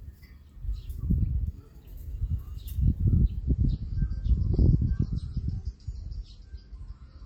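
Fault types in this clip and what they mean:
Adaptive stream at a lower bitrate: From 3.41 s to the end, the stream switches abruptly to a lower-bitrate version, with no gap. Nothing above 8.4 kHz remains, so the top end turns dull and coarse. This fits a drop from 128 to 32 kbit/s MP3.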